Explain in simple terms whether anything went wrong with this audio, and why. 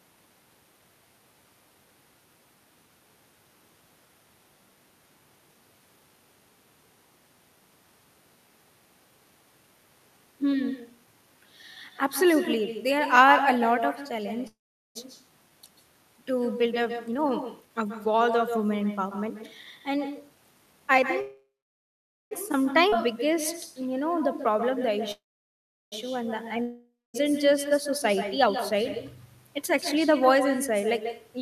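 Several things went wrong in this speech recording, all typical of a shaky internet call.

Echo with no canceller runs through the whole clip. The other person's loudspeaker is feeding back into their microphone, so every phrase returns a short moment later, roughly 0.15 of a second, as a quieter, thinner copy. Unlike the other faults, it never comes and goes.

A call audio freeze happens three times: 14.47 to 14.97 s, 21.21 to 22.33 s and 25.12 to 25.94 s. Each time the last sound hangs on as a fading buzz, then goes silent. The likely cause is delayed data. Afterwards the speech resumes exactly where it stopped, so nothing is lost, only paused.

A jitter buffer speed-up follows two of these. From 16.57 to 20.81 s the speech runs about 11 percent fast and sounds hurried while the pitch stays normal, as the system trims roughly half a second to catch up. From 24.40 to 29.17 s the speed-up is only about 1 percent and hard to notice.

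A skip ahead occurs at 22.89 to 22.94 s. About half a second of speech simply vanishes, and the two sides are joined almost seamlessly. Unlike a freeze, there is no pause or buzz, just a sudden jump forward.

A long network dropout hits from 26.62 to 27.16 s. The sound again stretches into a fading buzz and a brief silence, but this time 0.66 s of speech never returns, so when audio resumes part of what was said is permanently missing.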